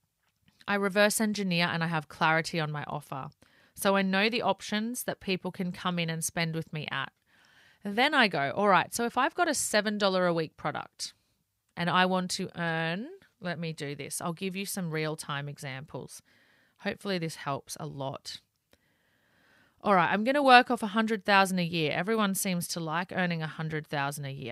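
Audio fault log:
No technical faults can be heard anywhere in this speech recording, and the signal stays steady and intact for its whole duration.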